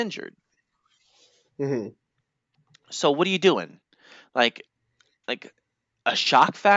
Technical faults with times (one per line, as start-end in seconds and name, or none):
none